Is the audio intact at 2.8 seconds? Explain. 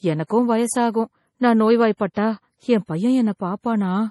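No. At 2.8 seconds the speech carries heavy MP3 compression damage, as it does from start to finish. The cause is likely a starved MP3 encoder, and the damage fits a low bitrate around 32 kbps. Short of bits, the encoder cut everything above 11.5 kHz and dropped weak frequency lines, which flicker on and off between frames. The result sounds dull, watery and swirly. Sibilants turn metallic and attacks smear.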